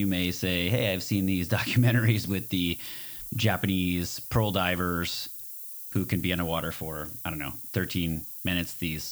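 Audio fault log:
Throughout, low bit depth with noise shaping: a steady, thin hiss sits only about 10 dB under the speech and rises sharply toward the top of the band. The coarse rounding fits a 7-bit signal, with its error pushed up in frequency.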